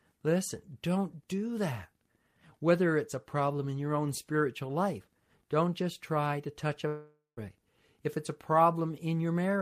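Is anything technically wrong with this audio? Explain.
Yes. From 6.87 to 7.39 s, just after "just try to touch", the last sound turns into a fading buzz, then goes quiet. This is likely a long network dropout. About half a second of audio never arrived, so the receiver stretched the last sound and then fell silent.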